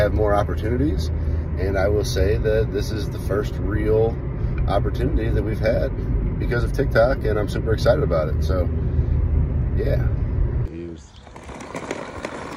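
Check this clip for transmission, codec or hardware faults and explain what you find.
I can't hear any faults in this recording. Nothing in the audio points to a problem anywhere between capture and playback.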